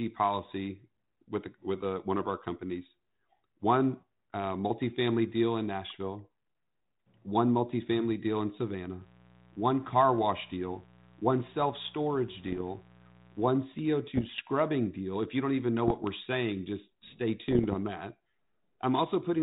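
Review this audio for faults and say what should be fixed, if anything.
A steady, raspy mains buzz sits under the speech from 8.98 to 13.54 s, at about 25 dB below the signal. Sharp switching spikes, probably from a dimmer, rectifier or unshielded cable, enter twice per 60 Hz cycle and spread harmonics into the kilohertz range. Shielding and grounding the cabling and keeping it away from dimmers and power supplies would prevent it.

Bit errors on an ADPCM link produce short pops and rough bursts with brief level jumps at 12.44 to 12.61 s, 14.15 to 14.41 s, 15.88 to 16.07 s (just after "you don't even know" and before "saying just stay"), and 17.48 to 17.76 s (right after "saying just stay"). Roughly 0.4 to 0.7 percent of bits are corrupted. Each flipped bit throws off the decoder's step size and prediction, so the damage rings on for milliseconds within the 4 kHz band of the 32 kbit/s G.726 link. 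Improving the radio link or adding error protection would prevent these bursts.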